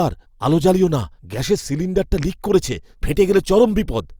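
At 2.03 s the speech drops into a block of digital silence about 1.6 ms long, pointing to an output buffer left unfilled in time. The abrupt cut and return sound as a single tick. The waveform shows a brief flat line, and the spectrogram a thin vertical broadband stripe.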